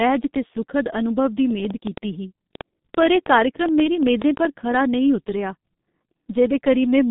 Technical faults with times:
0.00-7.11 G.723.1 codec
1.51-4.76 train of clicks

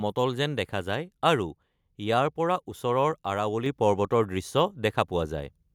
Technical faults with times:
3.66 microphone volume stepped up

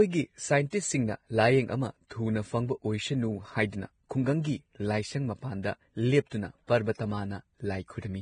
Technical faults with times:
0.00-8.21 Vorbis compression
0.70-0.72 pre-echo
2.07-2.11 pre-echo
4.09 pre-echo

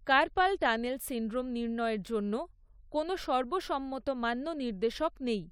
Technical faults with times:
none

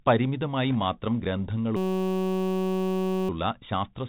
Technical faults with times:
0.00-4.08 Bluetooth CVSD headset codec
0.70-0.76 bit errors on a Bluetooth voice link
1.77-3.29 system hang loop

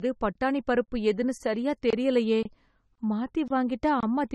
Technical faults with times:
0.00-4.34 generation loss
0.33-0.35 gap between chunks
0.85-0.88 gap between chunks
1.38-1.40 gap between chunks
1.90-1.93 gap between chunks
2.43-2.45 gap between chunks
2.95-2.98 gap between chunks
3.48-3.50 gap between chunks
4.00-4.03 gap between chunks

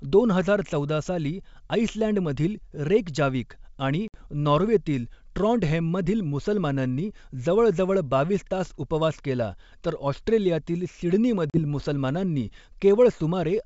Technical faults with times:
4.08-4.27 packet loss on an ADPCM call
11.50-11.60 packet loss on an ADPCM call

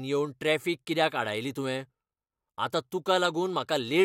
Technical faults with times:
0.84-3.88 clock drift buffer slips

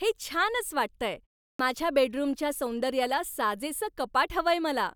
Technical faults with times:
1.54-1.59 clipped start after a pause

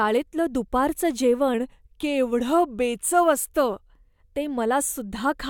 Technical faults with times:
1.54-3.73 drift correction step

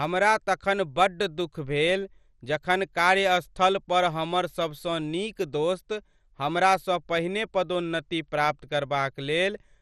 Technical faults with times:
0.00-9.82 MP2 compression

